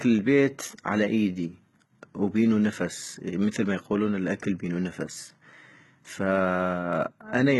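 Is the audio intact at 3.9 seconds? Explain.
No. At 3.9 seconds, as across the whole clip, the speech has a gritty, metallic treble: s sounds come out lispy, and nothing is present above about 11.7 kHz. This is likely HE-AAC compression, heavy enough to suggest a very low bitrate of around 16 kbps. The codec keeps only the lower spectrum and fabricates the top by copying lower bands upward under a coarse envelope, so the rebuilt harmonics fail to line up with the real ones.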